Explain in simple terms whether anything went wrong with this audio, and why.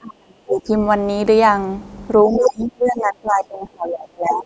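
Twice the talker's speech is pulled down hard: from the very start to 0.7 s, and again from 2.27 s to the end of the clip. In both stretches the voice sinks far below its normal level. This is speech suppressed in double talk, and the likely cause is that the far end was talking at the same moment. The echo canceller couldn't tell the local talker apart from the loudspeaker echo, so it turned everything down together.

Just after the second dip begins, from 2.33 to 2.39 s, a short scrap of a second voice breaks through. It is quieter than the talker. This is the other side's voice leaking through, likely loudspeaker sound that the echo canceller failed to fully remove from the microphone signal. It is brief.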